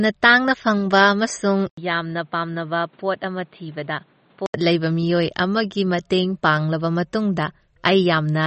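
MP3 compression affects this speech recording from start to finish, with plainly audible codec damage and nothing above 8.3 kHz. The sound is likely the result of a low-bitrate MP3 encode, consistent with about 32 kbps. Starved of bits, the encoder drops weaker frequency lines that flicker in and out between frames and cuts the top at a fixed frequency, leaving a watery, swirly texture and smeared attacks. An input switched to a poorer device marks the stretch from 1.69 to 4.54 s, where the band narrows to nothing above 4.6 kHz, with an 80 ms silence at the switch. The level drops by about 5 dB, and new background noise appears roughly 35 dB below the signal. This points to a change of input to a narrower-band microphone or headset profile, which dulls the speech until the original input returns at 4.54 s.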